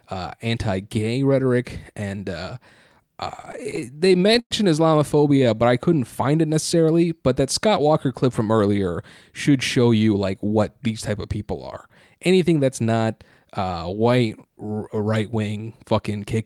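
From 3.37 to 4.53 s the speech breaks into repeated stalls (stutter). The jitter buffer ran dry 19 times, and each gap was filled by extending the last sound, the longest for 111 ms. That is about a quarter of the span, with nothing lost. On a spectrogram it shows as smeared, frozen harmonic bands. The waveform shows repeated cycles, with fades in the longer holds.

Jitter buffer speed-up follows between "from earlier should show" and "these type of people", at 10.07 to 10.45 s, and again at 15.25 to 16.36 s. Both run at 108% speed at unchanged pitch. The receiver dropped pitch-period slices to shrink an overfull buffer, roughly 40 ms and then about a tenth of a second. This sounds hurried, and the syllables look slightly compressed in time.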